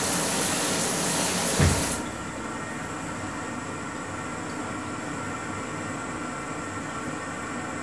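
Everyday sounds, no faults heard.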